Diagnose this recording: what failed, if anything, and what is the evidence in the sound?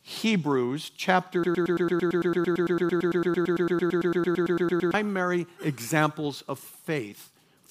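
A broken-record loop runs from 1.44 s to 4.94 s. A 112 ms fragment repeats exactly, back to back, 31 times. The likely cause is a stalled playback or stream buffer re-sending its last block. The audio due in that span is lost.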